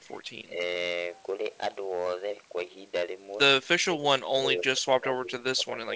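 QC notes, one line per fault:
throughout: hard clipping. The signal is driven about 12 dB past full scale, so about 3% of samples are squared off, adding a harsh, crackling fuzz on loud syllables.
0.46–0.52 s, 3.77–4.05 s, 4.34 s to end: speech suppressed in double talk. The level dips by about 10, 20 and 15 dB, likely an echo canceller ducking the talker while the far side spoke.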